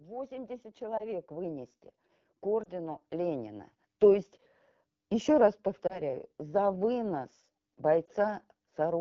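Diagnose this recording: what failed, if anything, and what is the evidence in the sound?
Throughout, the speech has a rough, raspy, buzzy edge, with the band above 6.4 kHz replaced by a thin hiss. That points to the codec stage: an AMR wideband (HD Voice) codec running at one of its lowest rates, which fits the 8.85 kbit/s mode. At that rate the pulse excitation is too coarse to model the voice cleanly below 6.4 kHz, and the band from 6.4 to 7 kHz is only shaped noise, so the damage is plainly audible.

Twice the level climbs smoothly, with voice and background noise swelling together. From 0.05 to 1.78 s it rises by about 8 dB, and from 2.42 to 3.74 s by about 6 dB. This is automatic gain rising in the call processing stage. The gain control judged the input too quiet and raised its gain gradually rather than in a step. Because it acts on the whole signal, the noise floor lifts along with the speech.

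Four brief dips occur at 0.97, 2.63, 5.87 and 8.05 s. Each is a single 20 ms gap, and the speech comes back momentarily weaker and rougher. These are lost AMR speech frames, a network fault. Radio errors made each frame fail its checksum, so the decoder repeated the last good pitch and vocal tract settings at reduced gain. In wideband that concealment fades quickly, so each loss is a short, soft blemish.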